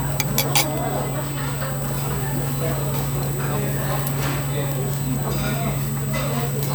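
From start to finish, current drawn by a USB device in 125-microsecond microframes is leaking into the audio through its power or ground path, producing USB whine. The result is a steady, fixed-pitch whine at 8 kHz with a stronger partner at 16 kHz, where most of the energy sits. It runs the whole length of the clip, only around 10 dB below the wanted sound, so it reads as a thin, piercing whistle laid over everything.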